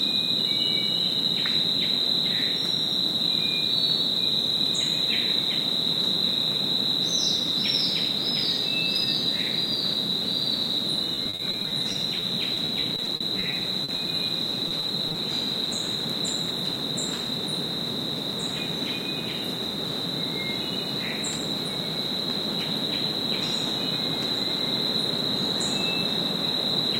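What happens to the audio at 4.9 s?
Nothing goes wrong at 4.9 s; the audio plays through that moment intact, with no dropout, click or other fault.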